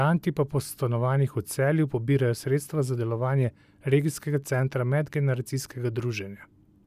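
No technical faults can be heard anywhere in the speech recording; the signal stays continuous and stable throughout.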